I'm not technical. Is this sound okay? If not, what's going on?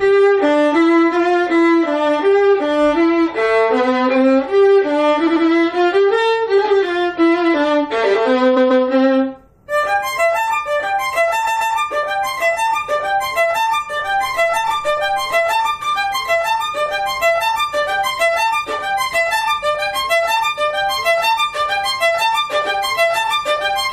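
No. Three times the sound hiccups, with a short snippet playing three times in a row: at 5.26 s (about a tenth of a second) and at 8.56 s and 11.46 s (about 0.14 s each). This is repeated frames: chunks of the compressed file were copied, which adds slightly more time.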